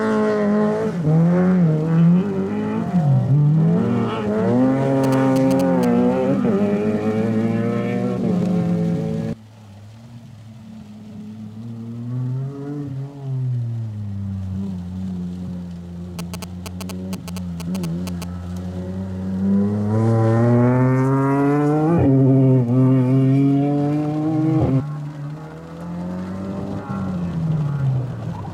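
At 5.04 to 5.85 s and again at 16.19 to 18.24 s, GSM signalling bursts appear. A nearby 2G phone's radio pulses are rectified by the audio circuitry. They gallop as a dit-dit-dit of short 217 Hz buzzes, roughly 10 dB below the sound.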